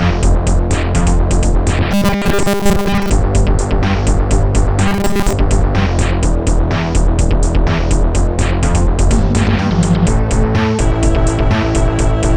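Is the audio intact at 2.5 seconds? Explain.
No. At 2.5 seconds the audio is inside a stretch of robotic sound from repeated short buffers, running from 1.92 to 3.10 s. The likely cause is audio arriving too seldom, so playback loops the last 5 ms of signal while the real audio is skipped, with roughly 70 percent of the stretch made of repeats. That 5 ms loop imposes a fixed 200 Hz buzz, giving a rigid, metallic sound that only loosely tracks the underlying sound.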